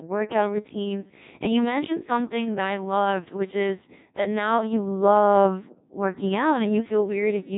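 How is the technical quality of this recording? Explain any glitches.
Poor throughout, because the speech runs through a Codec 2 vocoder for the whole clip. Only pitch, voicing, energy and a spectral envelope survive, and the decoder rebuilds the voice from sine waves. That makes it heavily robotic and buzzy, with nothing above 3.8 kHz, which fits a rate near 1.6 kbit/s.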